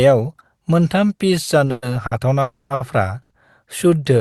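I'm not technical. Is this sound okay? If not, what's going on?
No. The speech has several hiccups, all in the middle of the clip.

From 1.65 to 2.13 s there are repeated stalls, a stutter. The sound catches four times in under half a second. Each time, the last bit of sound is held and stretched while the call waits for more audio to arrive. The longest hold is about 110 ms. Together the holds add about 180 ms. Nothing is lost, but the speech drags and jerks.

From 2.41 to 2.72 s there is a call audio freeze. The sound stops moving forward for about 290 ms. The last sound is drawn out and fades, with a brief silence of about 40 ms, before the speech carries on from where it left off. This was likely caused by the audio being held up on its way across the network. A pause has been added, but no speech is missing.

There are two short stalls from a late packet. The first runs from 2.74 to 2.82 s and lasts about 60 ms. 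The second runs from 3.22 to 3.32 s and lasts about 80 ms. Each time, one small piece of audio arrived late, so the sound just before it was held a little too long. You may hear a slight buzz or dip. Then the speech continues with nothing missing.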